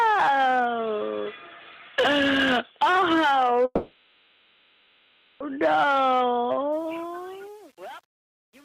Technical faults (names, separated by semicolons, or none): call audio freeze; truncation distortion on a fade